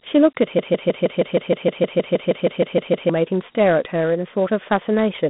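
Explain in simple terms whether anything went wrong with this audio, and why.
The speech was saved in Dialogic VOX ADPCM, a phone-system format that stores each sample as a coarse 4-bit step. From start to finish, only the range from about 150 Hz to 3.6 kHz remains, so it sounds thin and telephone-like, with plainly audible gritty hiss.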